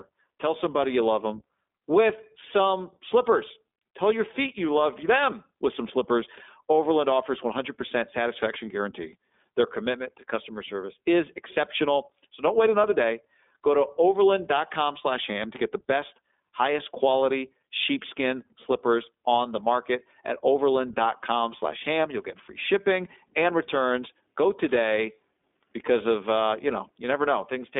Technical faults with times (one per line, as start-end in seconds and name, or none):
0.00-27.80 iLBC codec